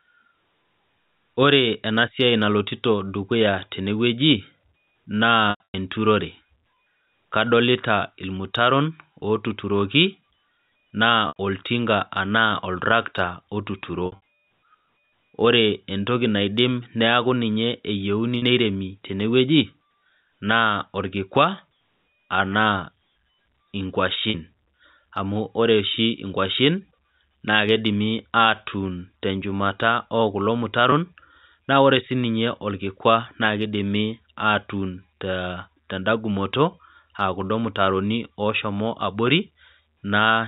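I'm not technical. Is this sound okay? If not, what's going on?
No. The speech has packet loss with pitch repetition: small pieces went missing in transit, and the receiver filled each gap by repeating the last bit of voice, which sounds like a brief buzzy hold, fading into silence in the longer gaps. It happens at 5.50–5.74, 9.20–9.22, 11.28–11.36, 14.06–14.20, 18.38–18.42, 24.30–24.34 and 30.90–30.92 seconds. The longest, near 5.5 and 14.1 seconds, break up in patches. The muffled phone-line tone is normal G.711 telephone coding.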